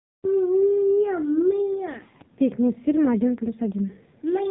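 From about 0.62 s to 4.46 s there's an AMR rate drop, which sounds like the codec stepping down from 12.2 kbps to around 5.9 kbps to protect a shaky link. The band stays the same and nothing drops out, but the speech turns buzzier and more synthetic until the end.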